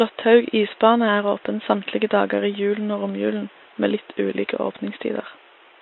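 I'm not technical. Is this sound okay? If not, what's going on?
No, not quite. All the way through, the speech sounds rough and grainy, with an artificial, thin top end. That's most likely low-delay AAC compression, the kind video calls use, which squeezes audio into very short chunks and blurs voice detail. The quiet room noise underneath is just the recording space.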